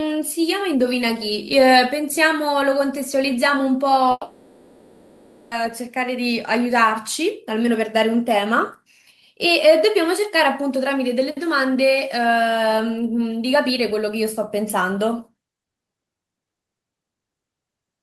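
A speech recording in which, from 4.11 to 5.53 s, the sound smears into a fading buzz, goes briefly silent, then resumes with about 1.4 s missing, likely a long network dropout.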